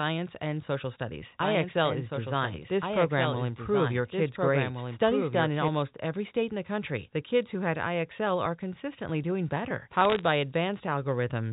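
From 1.42 s to 5.68 s the speech carries a doubled audio track: a second, full-band copy about 5 dB quieter runs roughly one and a half seconds behind, dry and cutting in and out abruptly, likely from a second, slower capture path.

Between 10.01 s and 10.23 s, bit errors on a digital phone line produce a short burst of sharp ticks and crackle over the 4 kHz-limited G.711 speech. Flipped bits corrupt individual samples, at an error rate of around 0.3 percent.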